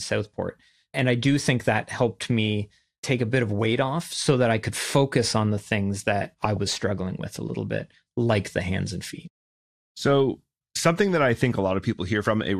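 A short burst of noise appears at 6.45 s and runs to about 6.57 s, right after "on the things that" and before "struggling with a little". This is DAB burbling: weak reception let residual bit errors, a small fraction of a percent, slip past error correction into the MP2 audio data. Corrupted samples put short blips of noise into individual sub-bands across 7 frames, heard over the speech.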